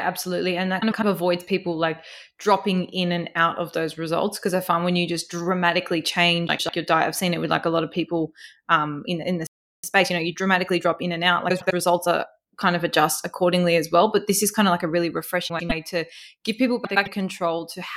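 Frames out of order at 0.81 to 1.04 s: two adjacent blocks of about 104.5 ms, which fits runs of four frames, were decoded in swapped order. The stretch plays with its halves exchanged, giving a garbled flutter. The same fault recurs at 6.48 to 6.69 s, 11.49 to 11.72 s, 15.49 to 15.72 s and 16.85 to 17.08 s.

Playback stall at 9.47 to 9.84 s: the sound cuts off mid-flow and goes silent for about 367 ms, then resumes where it stopped. The player likely ran short of data or had its output thread blocked.

Time-compressed catch-up from 9.84 to 12.28 s: to clear the backlog left by the stall, the player trims and cross-fades small slices of audio. The sound runs about 1.15 times faster at unchanged pitch, hurried, with the 11.49 s reordering falling inside this stretch.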